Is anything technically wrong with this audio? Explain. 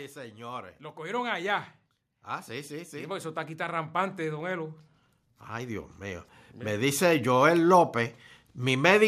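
Yes. The clip shows automatic gain rising three times. From 0.13 to 1.61 s the level climbs by about 6 dB. From 2.25 to 4.82 s it climbs by about 9 dB. From 5.49 to 7.02 s it climbs by about 5 dB. Each time, the automatic gain control judged the input too quiet and raised its gain step by step. Speech and background noise swell together, so the room tone grows along with the voice.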